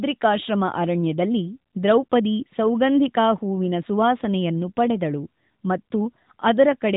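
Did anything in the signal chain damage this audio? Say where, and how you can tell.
No, nothing damaged this audio.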